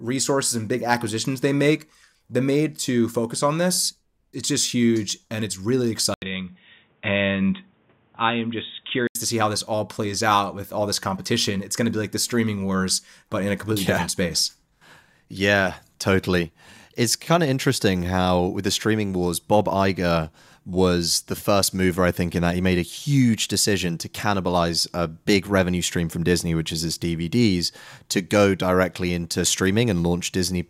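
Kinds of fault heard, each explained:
Input switched to a poorer device: from 6.14 to 9.15 s the speech turns boxy, with nothing above 3.8 kHz, after a brief 80 ms silence at the switch. The level holds steady, but a new noise floor appears roughly 40 dB down, likely from a narrower-band microphone or headset call profile.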